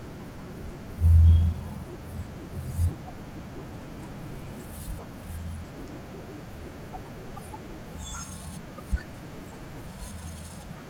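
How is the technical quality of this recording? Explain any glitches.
The speech has two brief glitches. At 7.36 to 7.39 s and again at 8.77 to 8.80 s, the sound jumps ahead abruptly. Each lasts about 28 ms, roughly one 24 ms MP3 frame. The likely cause is a broken MP3 bit reservoir. Frames were lost, so the next frame reached back for borrowed data and decoded bytes from the wrong frame.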